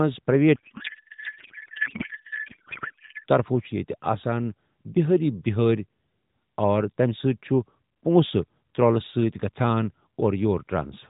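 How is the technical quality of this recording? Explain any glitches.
The recording is narrowband mobile audio, with nothing above 4 kHz and a lightly coded edge that fits AMR-NB at its 12.2 kbps mode. There's one real glitch near the start.

From 0.56 to 3.26 s, just before "طرفو چھ", there's a codec payload misread. The speech turns into garbled noise and warble that barely follows it. The decoder is reading the frame bits with the fields in the wrong places, which points to octet-aligned AMR being unpacked as bandwidth-efficient.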